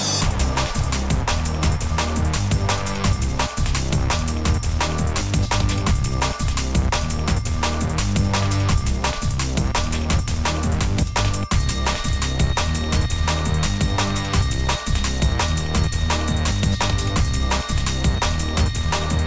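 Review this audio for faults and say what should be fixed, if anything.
No faults heard in this recording, so nothing needs fixing.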